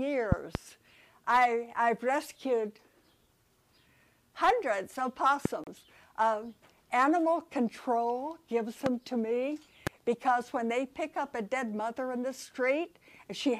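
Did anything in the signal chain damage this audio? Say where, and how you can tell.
Yes. Loud pops, likely from voltage spikes in the analogue wiring: a double pop between 0.32 and 0.57 s, then single ones at 5.45, 8.86 and 9.87 s. Each jumps about 15 dB above the sound (about 20 dB at 5.45 s) while the audio continues underneath.

A Bluetooth stall occurs at the playback link, at 5.64–5.67 s. The sound drops to silence for 32 ms and then resumes, likely because interference delayed packets over the wireless link and the headphone buffer emptied until the resent data arrived.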